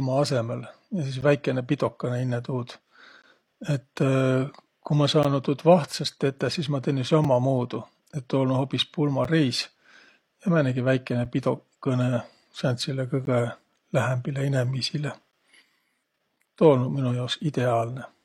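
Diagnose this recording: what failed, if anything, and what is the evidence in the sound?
The fault lies in playback, where streamed segments are joined: a gap between stream segments. Brief hard-edged silences appear at 1.21, 3.22, 5.23, 7.24, 9.24, 11.25, 13.25 and 15.31 s, each 4 to 17 ms long, about every 2 s, matching a 2 s segment length. Each pair of segment timestamps leaves a small hole, and the player fills it with silence. Unlike a packet dropout, nothing is missing: the speech resumes exactly where it stopped, only delayed.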